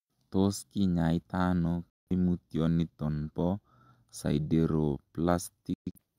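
At 1.90 s the speech cuts to silence until 2.11 s, and at 5.74 s it breaks into short holes until 5.99 s, the longest about 0.13 s. This is a digital broadcast dropout: the receiver muted on failed frames, about 0.17 s lost each time.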